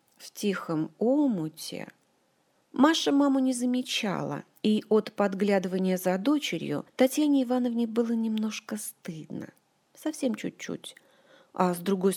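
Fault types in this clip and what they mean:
No audible technical faults turn up anywhere in the clip.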